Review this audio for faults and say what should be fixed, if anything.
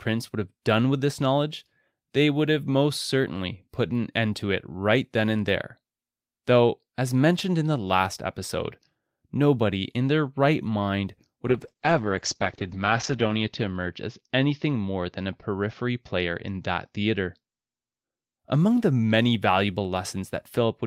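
A call bitrate drop runs from 11.48 to 18.45 s. The encoder codes the speech coarsely and its bandwidth narrows from 20 kHz to 8 kHz, sounding muffled and watery, worst for 1.72 s. This fits a fall from about 32 to 8 kbps. Setting a higher bitrate floor and damping bandwidth-estimate swings would prevent it.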